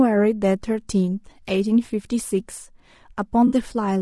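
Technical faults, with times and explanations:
Throughout, low-delay AAC compression: the speech stays rough and grainy from start to end, with noise between the pitch harmonics and a thin, synthetic top band. Plainly audible damage of this kind fits about 32 kbps, likely AAC-ELD, whose short frames resolve pitch poorly.
3.47 to 3.53 s, AAC frame loss with concealment: a brief smeared, noisy, phasey patch where the decoder filled 40 ms from the last good spectrum, which fits two lost frames. Unlike a plain dropout, the gap is patched over instead of going silent.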